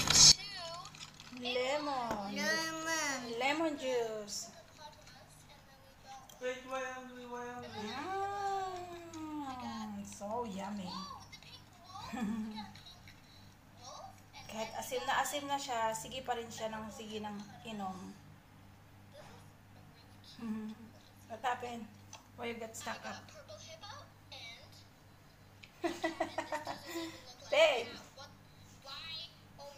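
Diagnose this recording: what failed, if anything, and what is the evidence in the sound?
From about 0.32 s right to the end, the summed signal drops by about 20 dB, and what's left is faint, with the centre content mostly gone. That points to one channel inverted, likely a polarity swap in the analogue wiring, like a miswired balanced lead. Once the two sides are summed to mono, everything common to both cancels, leaving only the faint difference between them.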